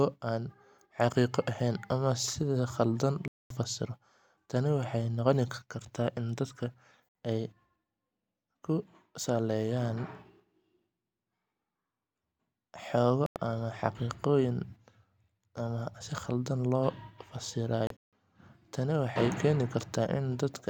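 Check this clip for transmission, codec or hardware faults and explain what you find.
There's one problem here, a digital broadcast dropout, and it hits the speech four times: 3.28 to 3.51 s, 7.09 to 7.15 s, 13.26 to 13.37 s, and 17.87 to 18.13 s. Each time the receiver lost good frames and muted until clean ones arrived, so the sound just drops out and picks up later, with whatever was said in between gone. The gaps run about 224, 64, 96 and 192 ms, which fits whole frames of roughly 32 ms going missing. The last one is broken into a few short holes spread over about a quarter of a second, the longest lasting 160 ms.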